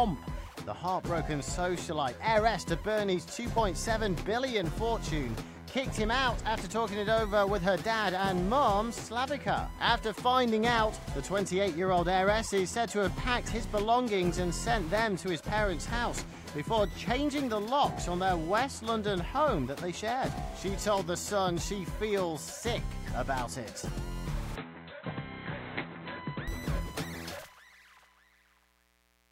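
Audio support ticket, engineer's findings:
24.56–26.48 s: sound turns dull and boxy, nothing above 4.1 kHz. No gap at switch, level unchanged, faint new noise floor about 50 dB down. Input switched to a poorer device, likely a narrower-band mic or headset call profile.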